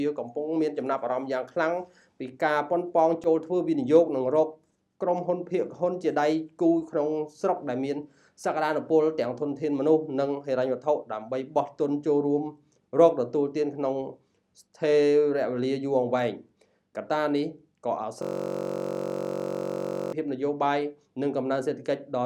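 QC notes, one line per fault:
18.22–20.13 s, system hang loop: a 21.33 ms slice repeats about ninety times, giving a steady 46.9 Hz buzz, which fits a frozen system cycling a 1024-sample buffer.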